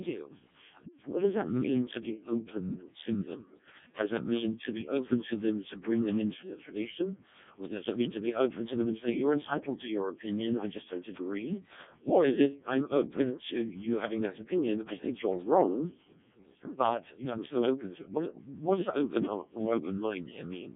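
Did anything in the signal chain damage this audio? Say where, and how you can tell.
Yes. In the driver or buffer stage, a filter restarted on every block. A 50 Hz buzz runs throughout, following level, because each block starts from cleared state.

At the codec, Codec 2 vocoder at 0.7 kbit/s. Speech is heavily robotic and buzzy, with nothing above 3.8 kHz. It is resynthesised from pitch and envelope.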